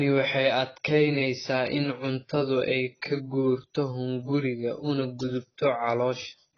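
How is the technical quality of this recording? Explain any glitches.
The recording is heavily degraded. AAC compression, throughout: likely a very low-bitrate AAC-LC encode, around 16 kbps, that cuts everything above 6.8 kHz and leaves the speech dull, smeared and fizzy on sibilants.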